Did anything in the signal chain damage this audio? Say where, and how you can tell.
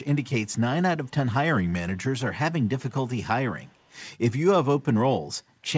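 Yes. Echo leak at the far end's call processing. A very faint copy of the speech returns 316 ms late at 0.46–0.51, 1.05–1.11, 2.64–2.68 and 3.65–3.97 s. Its echo canceller likely missed loudspeaker pickup.

A drift correction step in the receive buffer. From 1.56 to 2.21 s the speech slows by 5.5% and drops nearly a semitone, then snaps back. Clock-matching software likely changed the playback rate in one jump.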